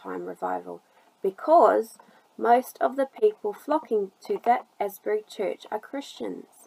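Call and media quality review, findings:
No audible faults found in this recording.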